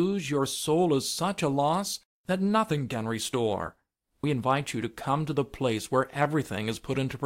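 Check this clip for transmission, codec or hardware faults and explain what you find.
No transmission, codec or hardware faults.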